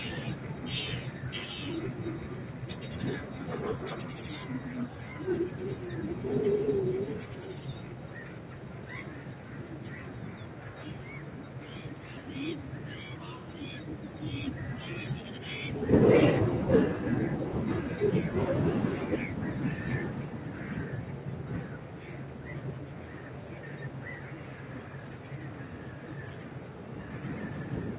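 A noise suppressor meant for speech was left on across the whole of this clip of sounds. It treats steady tones, ambience and reverberant tails as noise, letting attacks through while sustained parts are pulled down. That makes the level swing by about 5 dB, heard as pumping, fluttering or thinning. The call path carries nothing above 4 kHz, which fits a narrowband G.711 mu-law codec.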